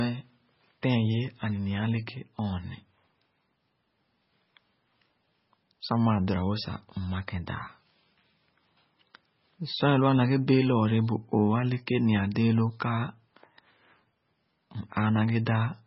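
Watery, swirly speech with smeared consonants and nothing above about 5.6 kHz runs throughout, likely heavy MP3 compression at a very low bitrate, near 16 kbps.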